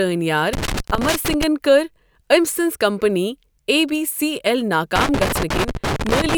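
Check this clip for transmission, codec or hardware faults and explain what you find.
There's a hardware fault here: loose connector crackle, turning up twice in this speech clip, from 0.53 to 1.43 s and again from 4.96 to 6.35 s. A worn or dirty contact is shifting and repeatedly breaking and remaking the connection, so the signal gets chopped up, and any DC sitting on the line adds pops. What you hear is an irregular, scratchy burst of crackle riding over the speech.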